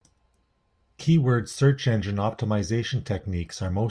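Listening to this short speech recording, nothing stood out as a technical problem at any point.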